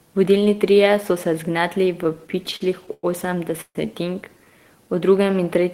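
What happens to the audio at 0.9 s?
Nothing goes wrong at 0.9 s; the speech carries on intact through that moment.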